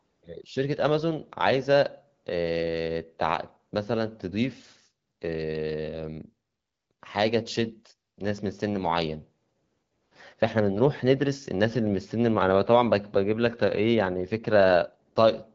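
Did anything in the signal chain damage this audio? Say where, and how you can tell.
No, nothing in the signal chain stood out as damaging this speech on listening.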